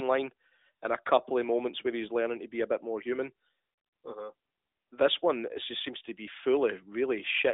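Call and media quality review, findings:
Nothing to flag on this one, just an ordinary narrowband mobile call path on the AMR-NB codec at 12.2 kbps, with the usual telephone band and nothing getting through above 3.8 kHz.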